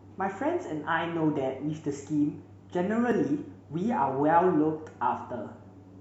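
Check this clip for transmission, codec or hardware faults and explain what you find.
One transmission fault is audible in this speech clip.

Overlap between stream segments, at 3.12 to 3.16 s: two consecutive stream segments, which fit a 6-second segment length, carried timestamps that overlapped, so the player trimmed what it took to be a duplicated stretch. That sound was not actually repeated, so about 40 ms of real speech is lost at the join. The waveform jumps across the gap, heard as a single brief click or tiny skip.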